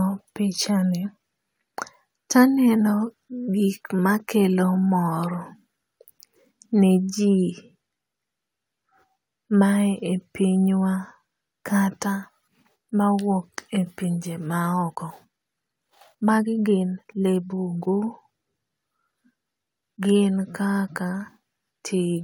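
Speech that suddenly turns rushed from 14.72 to 17.92 s, just after "mawuok e pinje ma", running about 1.49 times faster while the pitch stays put. This is a time-stretched section, likely squeezed to fit a length by dropping short slices of audio.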